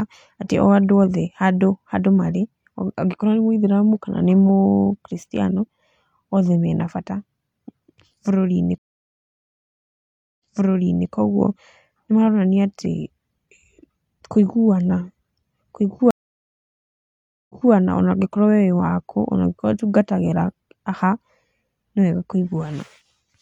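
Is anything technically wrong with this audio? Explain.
Yes, two stream reconnects. At 8.78 to 11.09 s and 16.11 to 17.73 s the connection drops, leaving 1.6 s and 1.4 s of silence. A fresh decoder restarts from a server burst, so the audio resumes 0.7 s and 0.23 s earlier, repeating a bit and fading back in.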